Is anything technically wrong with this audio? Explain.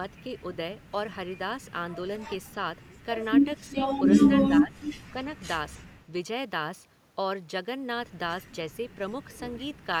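Yes, the speech has two kinds of fault, both around the middle of the clip.

Speech suppressed in double talk occurs at 3.72 to 3.78 s and again at 4.29 to 4.82 s. The likely cause is an echo canceller that, with both sides talking, could not tell this talker from its own loudspeaker echo and turned everything down. The first event is a brief, slight dip. The second is longer and much deeper, so the speech sinks for roughly half a second.

Echo leak follows at 4.80 to 4.95 s, just as the second dip ends. Here a delayed copy of the speech comes back about 265 ms late, well below the level of the original. It sounds like a short, faint scrap of echo. The likely cause is that a loudspeaker-side echo canceller left part of its microphone pickup in place and sent it back down the line.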